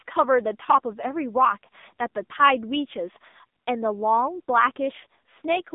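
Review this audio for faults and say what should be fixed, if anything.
The AMR narrowband mobile codec affects the whole clip. The speech sits in a telephone band of roughly 0.2 to 3.7 kHz, with nothing above 3.8 kHz, which points to 8 kHz sampling. Each 20 ms frame is rebuilt from a vocal-tract filter excited by a few pulses, and at this damage level the voice sounds buzzy and synthetic, which fits a low AMR-NB mode around 6.7 kbps. To prevent this, record or transfer through a wideband path instead of a narrowband mobile call.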